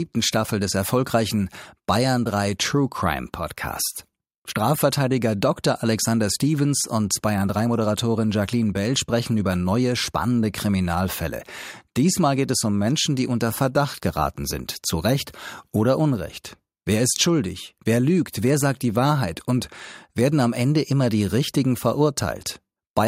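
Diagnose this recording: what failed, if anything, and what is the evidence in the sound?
Nothing failed in this recording, and the sound gives no evidence of any fault.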